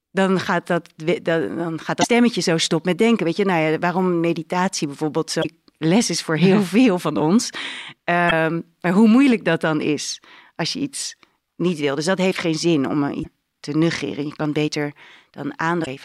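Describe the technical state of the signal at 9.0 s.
At 9.0 s the speech signal is intact, with no audible fault.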